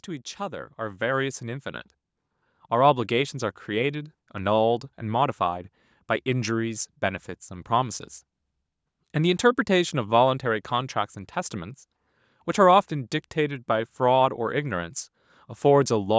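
A speech recording passed through call microphone processing, with content stopping at 8 kHz, shows automatic gain rising from 0.05 to 4.18 s. The control judged the input too quiet and raised its gain by about 9 dB over roughly four seconds. What sets this apart from a talker moving closer is that the background noise swells with the voice. Unlike a deliberate fade-in, the rise is a slow automatic correction.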